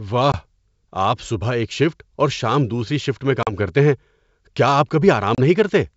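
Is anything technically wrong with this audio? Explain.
Yes, there are three spots of packet loss on an ADPCM call. The first is at 0.32 to 0.36 s, where about 20 ms goes missing. The second is at 3.43 to 3.52 s, right after "شام دوسری شفٹ میں", with about 40 ms lost, likely around four packets. The third is at 5.35 to 5.39 s, after "کیا آپ", with about 30 ms gone. Each gap is a hard-edged silence. The receiving decoder's predictor and step size drift from the sender's, so the speech comes back with some distortion for a few tens of milliseconds. Around these holes the wideband G.722 sound is clear.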